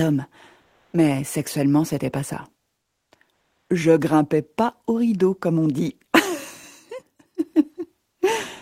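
At 0.61 to 0.93 s, 2.81 to 3.11 s and 3.33 to 3.69 s, the faint background turns into a flat, detail-free hiss, about 7 dB louder, then about 11 dB quieter, then about 6 dB louder. This is comfort noise in place of the background, likely Opus DTX.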